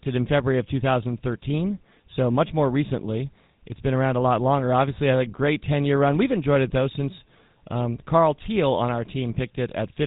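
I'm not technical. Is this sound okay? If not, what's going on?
No. The GSM full-rate codec, an old mobile-phone speech codec, affects the whole clip. It rebuilds the voice from a simple throat model fed by evenly spaced pulses, which gives plainly audible buzzy roughness, and it keeps nothing above about 3.8 kHz, so the speech sounds muffled.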